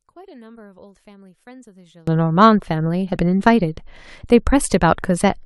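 One channel inverted, from 0.0 to 2.08 s: the speech drops by about 31 dB, leaving a faint residue, likely because reversed polarity cancels the shared centre content in a mono sum.

Damaged data in a compressed stream, from 3.15 to 3.17 s: corrupted frames make the decoder lose sync and search for the next header, producing a brief glitch.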